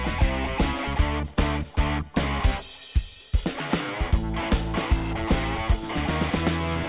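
Nothing technically wrong can be heard in this audio. There is nothing to flag at any point.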